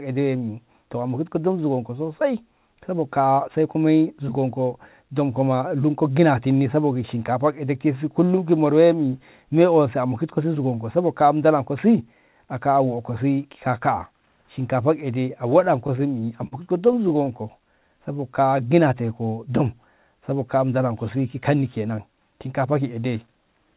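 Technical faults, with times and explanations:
15.6 to 17.37 s, repeated stalls (stutter): packets arrived late, so the jitter buffer ran empty sixteen times, the longest wait about 41 ms, and the receiver stretched the last sound to bridge each one, about 192 ms in all, making the speech drag and stutter with nothing lost.
17.8 to 19.07 s, jitter buffer slow-down: with its reserve low, the receiver repeated single pitch periods over and over, adding about 135 ms, so the speech plays at 90 percent speed without any change in pitch and the sounds come out drawn out.
21.16 to 22.93 s, jitter buffer speed-up: the buffer held more audio than it aims for, so the receiver cut short pitch-period pieces again and again, roughly 150 ms altogether, and the speech runs at 108 percent speed at the same pitch and sounds hurried.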